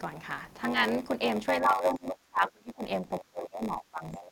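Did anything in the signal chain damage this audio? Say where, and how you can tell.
Yes. There is a block size mismatch (padded) at the driver or buffer stage, running through the whole clip. A steady buzz at 93.8 Hz sits under the speech, and everything plays at 0.938 times normal speed. The reading stage, which fits a 512-sample block, receives slightly shorter blocks from the stage before it. The missing tail of each block is zero-filled, so a tiny silent gap repeats once per block.

At call processing, speech is suppressed in double talk from 1.61 to 2.84 s and again from 3.02 s to the end. In the first stretch the level drops by as much as roughly 30 dB, and about a second of it is affected. In the second stretch it falls by around 25 dB. The likely cause is an echo canceller that could not separate this talker from the far end's loudspeaker echo, so it attenuated both.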